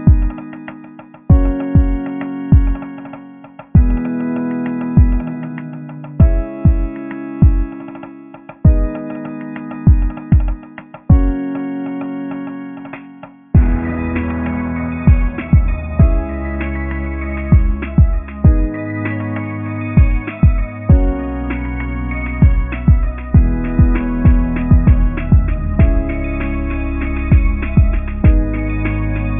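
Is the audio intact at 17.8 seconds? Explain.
Yes, at 17.8 seconds the audio is intact, with no dropout, click, distortion or other fault at that point.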